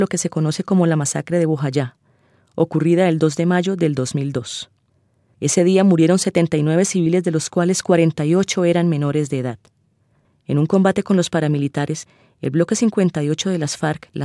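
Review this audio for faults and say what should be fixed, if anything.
Nothing here needs fixing, as no faults turn up anywhere in the recording.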